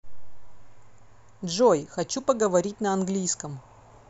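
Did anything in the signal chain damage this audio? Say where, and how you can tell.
No, nothing in this speech recording points to damage at any stage of the chain.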